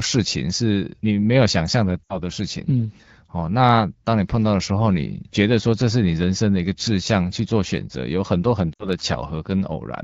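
At 2.04 to 2.18 s and again at 8.73 to 8.88 s, lost AMR speech frames interrupt the speech. Each gap, about 60 ms, fits three dropped frames. The wideband decoder stretches its last good sound, fades it quickly, then recovers roughly.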